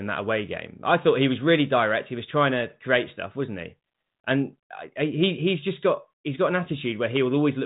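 No technical faults are audible.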